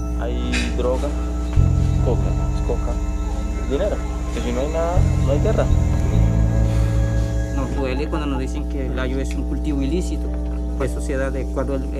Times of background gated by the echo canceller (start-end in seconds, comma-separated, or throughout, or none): none